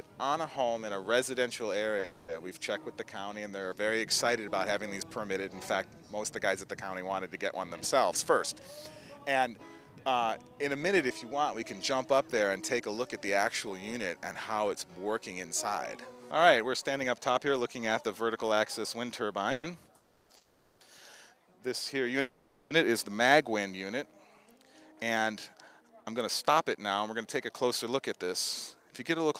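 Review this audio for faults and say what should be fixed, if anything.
At 2.00 s the sound is held a touch too long, about 20 ms, with a slight buzz or dip. This is a short stall from a late packet: the jitter buffer ran dry and the receiver stretched the last sound until the packet arrived. A slightly deeper buffer would absorb this.

Call audio freezes at 2.04–2.30 s, 19.52–19.66 s, 19.96–20.32 s, 20.36–20.83 s and 22.21–22.73 s hold the sound as a fading buzz or hiss lasting 120 to 500 ms, and the audio then picks up where it stopped. The likely cause is packets held up in the network, leaving the jitter buffer empty. Fixing congestion or prioritising the media traffic would prevent these.

Jitter buffer speed-up makes the audio run faster at an unchanged pitch at 8.30–9.79 s (104%, around 70 ms removed), 13.37–18.53 s (103%, around 150 ms) and 24.46–29.35 s (106%, around 300 ms), where the last sounds hurried. 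After the delays, the receiver trimmed pitch-period slices to shrink the excess buffer. A gentler catch-up rate would make this less noticeable.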